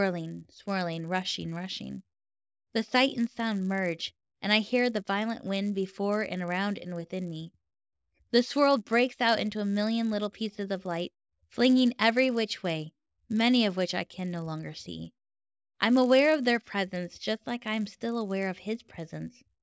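Speech runs throughout with a resampler restarted on every block. The conversion, which fits a step from 48 kHz down to 16 kHz, processes each 10 ms block in isolation, so each block's edges are filtered against silence or mismatched samples instead of true neighbours. Each boundary picks up a small error, and at 10 ms spacing these merge into a steady 100 Hz buzz riding under the speech, present only while sound is playing.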